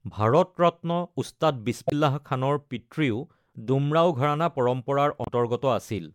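Damaged data in a compressed stream shows up twice in this speech clip, at 1.87 to 1.93 s, just after "ভাৰত ৰত্ন উস্তাদ", and again at 5.23 to 5.28 s. Each time the sound is disrupted for roughly 50 to 60 ms. Corrupted bytes in the encoded file make the decoder misread those frames and lose sync, so it emits garbage until it locks onto the next valid frame header.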